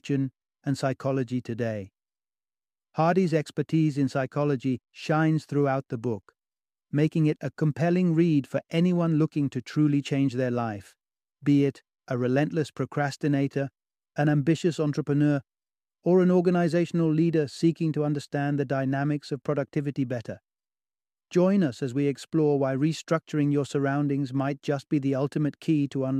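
No technical faults can be heard anywhere in the recording; the signal runs continuously with nothing in it that points to a problem in capture, processing or playback.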